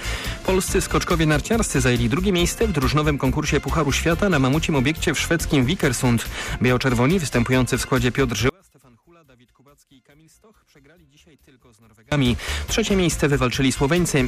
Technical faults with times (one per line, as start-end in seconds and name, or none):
8.49-12.12 one channel inverted